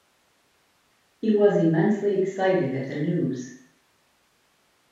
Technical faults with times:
none

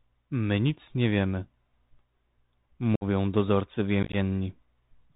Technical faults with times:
0.00-5.16 Bluetooth CVSD headset codec
2.96-3.04 unconcealed Bluetooth headset packet loss
4.03-4.15 unconcealed Bluetooth headset packet loss

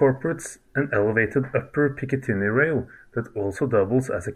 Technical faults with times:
2.27-3.40 drift correction step

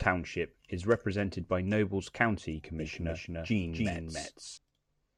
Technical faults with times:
2.79-4.57 doubled audio track

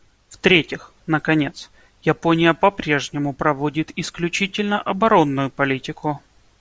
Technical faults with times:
none

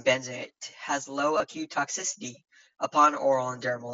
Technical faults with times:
1.38-1.40 concealed Bluetooth headset packet loss

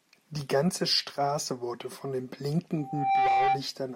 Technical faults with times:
2.78-3.64 loudspeaker feedback squeal

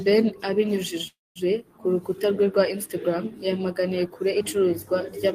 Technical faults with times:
1.07-1.38 call audio freeze

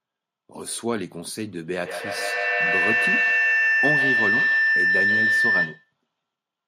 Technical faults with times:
1.85-5.93 feedback howl

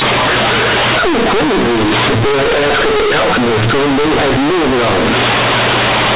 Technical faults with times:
0.00-6.16 companded audio read as linear

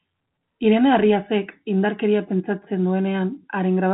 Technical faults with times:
none

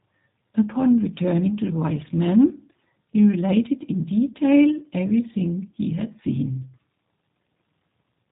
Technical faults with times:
0.00-8.31 G.729 codec

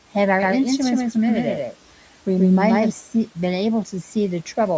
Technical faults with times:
0.42-2.90 doubled audio track

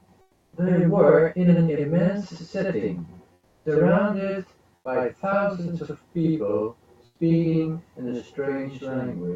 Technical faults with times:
0.00-9.36 channel delay (doubling)
0.21-0.53 comfort noise in place of the background
3.33-3.65 comfort noise in place of the background
4.75-4.85 comfort noise in place of the background
7.05-7.19 comfort noise in place of the background

